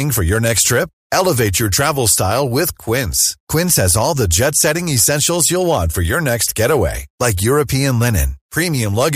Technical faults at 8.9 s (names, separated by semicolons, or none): hard clipping